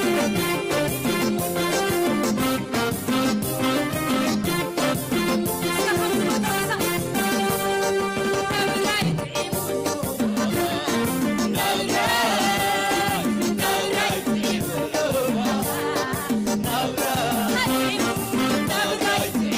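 No faults found in this recording.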